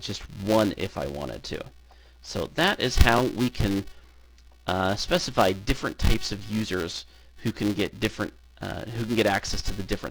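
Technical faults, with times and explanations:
Throughout: filter restarted on every block. A buzz at 375 Hz runs under the sound and tracks its level. The filter drops its internal state at each block boundary and restarts from silence, leaving a small transient on every block. That repeat rate fits a 128-sample block.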